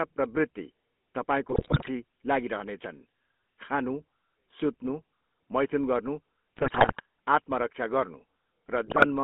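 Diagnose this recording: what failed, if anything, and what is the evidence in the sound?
The codec stage shows the GSM full-rate codec throughout. The speech is confined to roughly 200 Hz to 3.4 kHz and carries a steady buzzy, gravelly roughness, consistent with 13 kbit/s regular-pulse coding: a vocal-tract filter driven by a sparse pulse train that keeps every third excitation sample.

The radio link adds GSM bit errors in three bursts: 1.5 to 1.89 s, 6.56 to 7.02 s (between "मैथुन गर्नु" and "आत्मरक्षा गर्नु"), and 8.86 to 9.06 s. Each burst produces squawks, pops and gargling. Flipped bits corrupt the decoder's filter, pitch and gain parameters, distorting the spectrum or level of each frame they hit.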